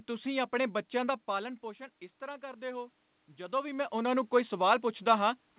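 Automatic gain rising runs from 1.36 to 3.79 s. Around 1 s the speech at the microphone drops by about 13 dB as the talker moves back, and the gain control responds by slowly pushing its gain up by about 4 dB over nearly two and a half seconds. Because the control amplifies everything it receives, the room noise swells along with the voice, giving a gradual lift rather than a step, heard through band-limited call audio that stops at 4 kHz.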